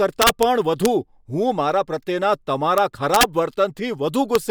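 Integer overflow cracks hit at 0.22–0.43 s, 0.85 s, 2.78 s, 3.14–3.23 s and 4.35 s. Loud speech peaks, up to about 4 dB over full scale, wrapped to the opposite sign instead of being limited, so each one snaps across the whole range as a violent crack, far harsher than clipping.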